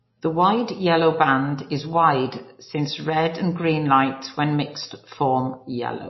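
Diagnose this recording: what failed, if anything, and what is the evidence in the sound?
The failure sits at the codec stage, likely MP3 compression at a low bitrate, around 24 kbps. Throughout the speech nothing survives above 5.8 kHz, and the damage is plainly audible: weak spectral lines drop in and out between frames, giving a watery, swirling texture.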